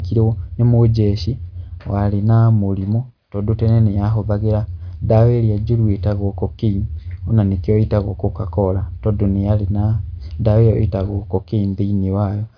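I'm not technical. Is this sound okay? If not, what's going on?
Yes, it's fine: nothing wrong can be heard.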